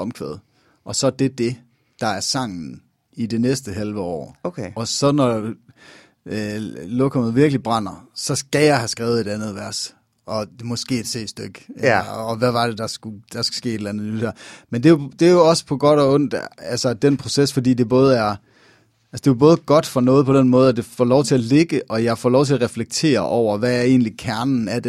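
Speech recording in which no technical fault can be heard at any point, the signal remaining steady and intact throughout.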